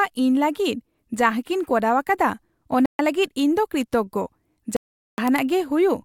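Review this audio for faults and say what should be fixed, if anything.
The speech drops to dead silence twice, from 2.86 to 2.99 s (135 ms) and from 4.77 to 5.18 s (415 ms), then resumes abruptly. This is likely a Bluetooth stall: radio interference delayed packets, the headphones' playback buffer emptied, and output halted until retransmitted packets arrived. To prevent it, reduce 2.4 GHz interference and keep the phone close to the headphones, or use a wired connection.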